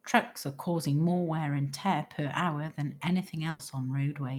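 This is a speech clip with a burst of packet loss from 3.49 to 3.61 s, just after "tear per hour than". The receiver stretches the last sound and fades it for about 100 ms. Speech then resumes with about 100 ms skipped.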